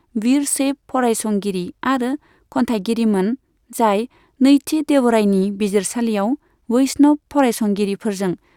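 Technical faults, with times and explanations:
No technical faults can be heard anywhere in this speech recording, and the signal holds steady with nothing breaking into it at any point.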